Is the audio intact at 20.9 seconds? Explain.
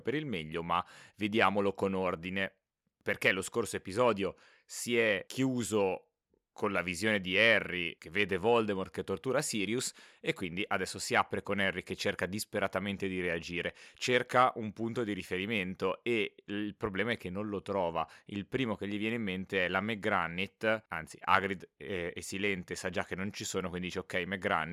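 Yes, at 20.9 seconds the speech is intact, with no dropout, click, glitch or other audible fault at that moment.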